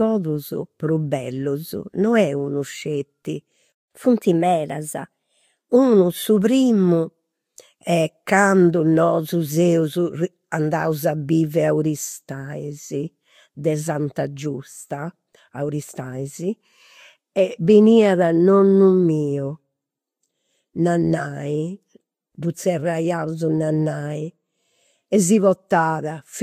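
A playback stall at 3.72 s cuts the speech off mid-flow into silence for about 185 ms, until 3.91 s. The likely cause is the player running out of buffered data, or its output thread being blocked, so nothing reached the output until it recovered.

Catch-up at higher speed follows from 3.91 s to 5.76 s. The player works through its backlog by resampling at 1.1 times normal speed, so the speech sounds hurried and raised by about a semitone and a half, then settles back to normal pitch and pace.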